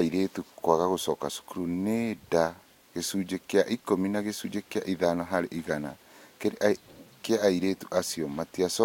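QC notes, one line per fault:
No faults found; nothing to log for this speech clip.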